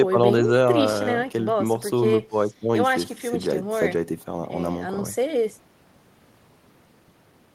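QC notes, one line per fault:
No technical faults are audible anywhere in the recording, and the signal holds steady with nothing in it calling for correction.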